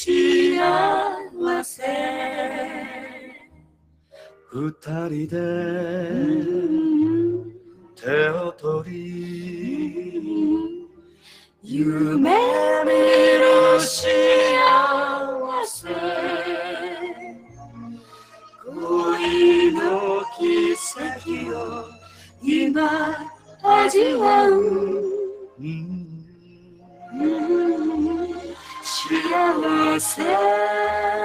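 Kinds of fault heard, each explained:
noise suppressor applied to music or sounds: a suppressor tuned for speech stays active across the whole clip. It treats steady tones, ambience and decays as noise, so level swings by around 15 dB. Attacks pass while sustained parts sink, unlike a compressor's smoother, level-driven gain changes.
sound cut by the noise suppressor: eight stretches where held or fading sound is pushed down further than its surroundings, deepest by about 19 dB at 2.67–4.87, 7.41–11.71 and 25.31–27.18 s. Sudden onsets still come through, which sets this apart from a dropout that mutes everything.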